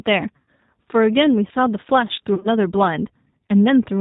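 The whole speech clip has passed through the G.729 codec, here at 8 kbit/s. The coder rebuilds each 10 ms frame from a vocal tract filter, a pitch predictor and a handful of pulses, and it discards everything above 4 kHz. The damage is plainly audible: the voice sounds band-limited, slightly rough and synthetic, with a dull top end. There is also VoIP packet loss concealed by the speech codec, at two points. From 0.36 to 0.48 s, about 110 ms of audio went missing, which fits a run of eleven lost 10 ms frames. The decoder kept extrapolating from its last pitch and filter while lowering the gain, so the sound smears into a buzzy tone or coloured noise that fades. The second loss, from 2.35 to 2.48 s, is scattered over about 100 ms, with 80 ms lost in total and no gap longer than 40 ms. It gives a weakened patch rather than one long smear, and the voice stays thin briefly after each gap because every frame builds on the previous one.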